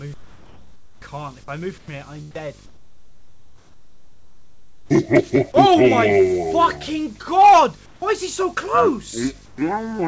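From 0.14 to 1.02 s the real background gives way to comfort noise, a flat, featureless hiss about 8 dB quieter, likely because the sender's voice detector stopped transmitting and the receiver synthesised filler. The same swap returns at 2.66 to 4.90 s (about 11 dB down), 7.86 to 8.02 s (about 4 dB) and 9.46 to 9.58 s (about 3 dB).

At 1.78 to 1.88 s the voice detector likely drops sound it mistook for background: about 70 ms of real audio vanishes under that steady noise. On this wideband call path nothing reaches above 8 kHz.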